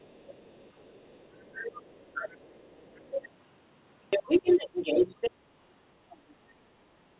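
From 0 to 3.3 s a faint second voice sits well beneath the speech, the other side's voice leaking through, likely loudspeaker echo the canceller failed to remove. Inside that stretch the talker dips by about 10 dB in short pieces between 0.26 and 0.92 s, then by about 15 dB between 1.45 and 1.8 s and again from 3.1 to 3.23 s. This is speech suppressed in double talk, likely the canceller turning down both voices while they overlapped. From 4.1 to 5.31 s the leaked voice returns, now louder than the talker, while between 4.22 and 5.2 s the talker loses up to about 10 dB in brief gaps as the suppression strikes again. A brief scrap of the other side's voice leaks through from 6.11 to 6.32 s, well below the speech. From 6.21 to 7.11 s the talker's level drops by up to about 15 dB in patches, once more the double-talk suppression. Nothing comes through above 4 kHz, which fits a G.711 mu-law call path at 64 kbps.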